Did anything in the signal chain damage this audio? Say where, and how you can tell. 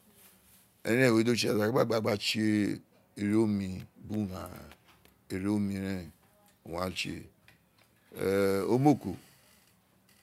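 No, nothing in the signal chain audibly damaged this speech recording. No stage leaves a mark: the sound never breaks, shifts in character or loses any of its content.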